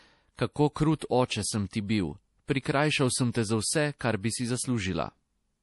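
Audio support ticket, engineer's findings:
Whole clip: watery, swirly speech, nothing above 11.5 kHz, plainly audible damage. Likely MP3 compression at a low bitrate, something like 48 kbps. Encoder short on bits, so it chops the top end and drops weak bands frame to frame.

0.36 to 0.39 s: short hiss smeared ahead of an attack, about 27 ms. Pre-echo from the same codec. Quantisation noise spread across the whole transform block, so the quiet bit before the hit gets filled too.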